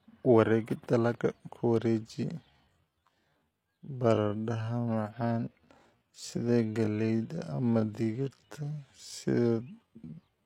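Speech with a time-stretched section from 2.47 s to the end, just before "digirta si": pace drops to about 0.57× and drags, likely from pitch-preserving stretching, since pitch stays unchanged rather than dropping as slowed playback would.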